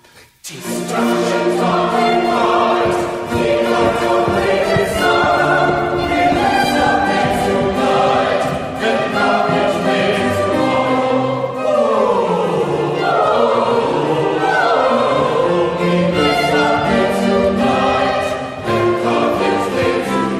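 Call bitrate drop from 2.04 to 7.11 s: the audio goes rough and muffled, highs gone, fitting an encoder squeezed from 128 to 18 kbps.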